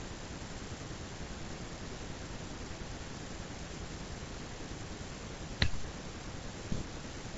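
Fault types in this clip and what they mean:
Nothing stood out on listening to this speech clip.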